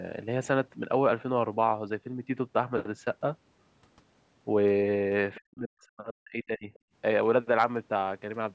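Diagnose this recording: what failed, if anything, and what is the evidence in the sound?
At 5.34 to 5.39 s a brief fragment of the other side's voice leaks through, sitting faint and far below the talker's level. This points to the call processing stage. The far end was being played on the talker's loudspeaker and picked up again by the microphone, and the echo canceller most likely failed to subtract all of that acoustic path during this short window, letting a scrap of residual echo pass into the send signal.

Immediately afterwards, from 5.39 to 6.71 s, the talker's speech is suppressed in double talk. The level drops deeply, on the order of 40 dB at its lowest. This is again call processing. With both ends active at once, the echo suppressor likely could not tell near-end speech from loudspeaker echo and attenuated the whole microphone signal, taking the talker down along with the echo. 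The band-limiting at 8 kHz is ordinary call microphone processing.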